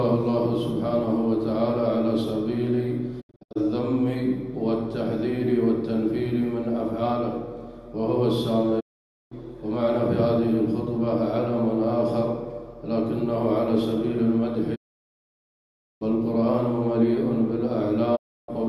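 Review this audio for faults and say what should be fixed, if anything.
Digital broadcast dropout mutes the sound at 3.20 to 3.57 s (several short holes, longest 72 ms), 8.79 to 9.33 s, 14.74 to 16.03 s and 18.15 to 18.50 s. The receiver lost valid frames and faded to silence over about 20 ms, unlike crackle or repeated audio from concealment. Improve reception margin or error protection so frames survive the link.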